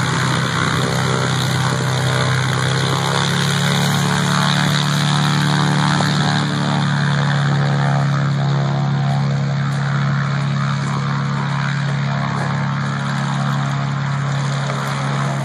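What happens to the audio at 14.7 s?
Nothing goes wrong at 14.7 s; the audio plays through that moment intact, with no dropout, click or other fault.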